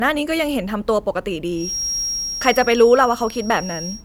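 From 1.53 s to the end of the speech, a feedback whistle sits at 5.6 kHz, roughly 10 dB below the signal: a thin, steady tone that swells and fades slowly in level. Its likely cause is a loudspeaker-to-microphone loop held just short of runaway feedback.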